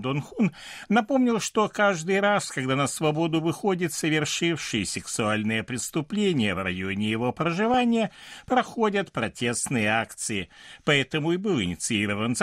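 At 7.74 to 7.77 s, just after "преступление в районе его", the speech breaks into DAB burbling: a brief burst of short noise blips. Weak reception let a small fraction of a percent of bits slip past error correction into the MP2 data. Across four frames the corrupted samples put short noise blips in single sub-bands, and any wrong scale factors that get through make sub-bands jump in level for up to a frame. Unlike a dropout or click, nothing goes silent and there is no broadband tick. Narrow bands flare briefly.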